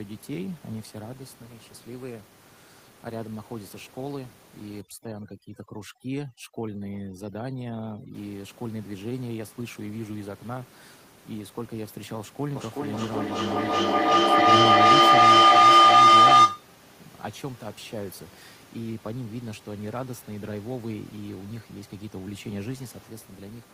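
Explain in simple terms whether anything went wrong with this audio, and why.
From 4.81 to 8.15 seconds, overdone noise removal cuts quiet parts of the speech along with the background, leaving twinkling near-silence.

From 12.55 to 16.73 seconds, a feedback howl builds as sound loops between microphone and loudspeaker roughly every 0.4 seconds, growing into a loud tone near 1 kHz.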